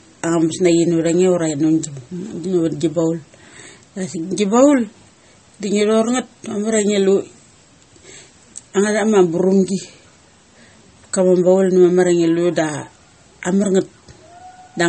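Throughout the speech, the sound is watery and swirly, with chirpy s sounds and nothing above about 8.4 kHz. That points to MP3 compression, likely at a low rate near 32 kbps, cutting the treble and switching weak frequency lines on and off.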